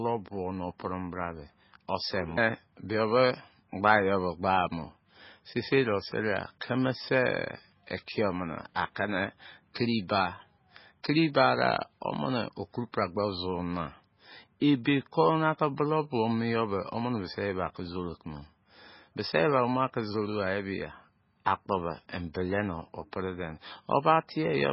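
Throughout the speech, nothing is present above 5.6 kHz, and the remaining band has a heavy watery, swirling texture. This is likely MP3 compression at a very low bitrate, consistent with about 16 kbps. With so few bits available, the encoder has cut the treble at a fixed point and discarded weaker spectral lines. Those lines switch on and off from frame to frame, which produces the unstable, underwater quality and smears the onsets of sounds.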